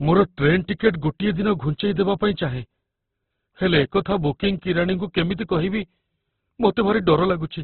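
Across the whole speech clip, the sound is heavily damaged and band-limited. Nothing comes through above 4.5 kHz, so the speech sounds narrow and dull. Tones lose their clean edges and turn rough, grainy and noisy. This is likely Opus compression in its music-oriented CELT mode, running at a very low bitrate, which fits about 12 kbps. Starved of bits, the encoder kept each band's energy but filled in detail with folded or noise-like content.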